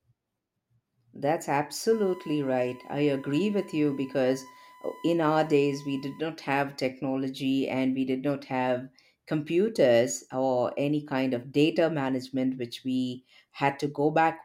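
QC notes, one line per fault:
1.92–6.20 s, USB whine: a steady 1 kHz tone sits about 25 dB below the speech, ending just before "not have technology and". Current drawn in 1 ms USB frames leaks through power or ground, producing a fixed pitch at the frame rate.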